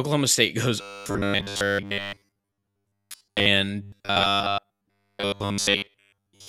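From 0.81 to 3.48 s and again from 3.82 to 6.48 s, the speech turns robotic from repeated short buffers: a rigid 100 Hz metallic buzz, likely from replaying 10 ms chunks in place of much of the audio. A spectrogram shows evenly spaced 100 Hz harmonic lines; the waveform shows identical repeating cycles.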